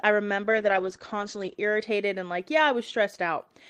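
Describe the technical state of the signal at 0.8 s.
At 0.8 s the speech sits inside a call bitrate drop running from 0.52 to 1.63 s, ending just before "and like yeah". The coarse, watery coding and the top end shut off at 8 kHz suggest the encoder fell from about 32 kbps to roughly 11 kbps for about a second after its bandwidth estimate dropped. On a spectrogram the energy above 8 kHz vanishes as a flat ceiling, and the remaining bands look blotchy and smeared.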